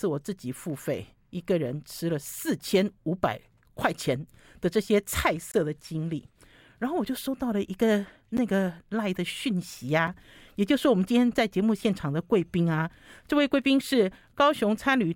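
Blocks of digital silence at 5.52 to 5.54 s (23 ms), 8.37 s (12 ms) and 10.07 s (5 ms). The speech drops abruptly to silence and back, consistent with 1024- and 512-sample buffers going unfilled, leaving a short hole or tick.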